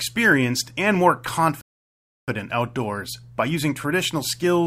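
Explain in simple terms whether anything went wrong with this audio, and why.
A rebuffering stall hits from 1.61 to 2.28 s. Right after "and more", the player ran out of downloaded audio and waited for more, so the speech drops to silence. It then resumes exactly where it stopped, at "outdoors by". Nothing is lost, but about 0.66 s of dead air is added.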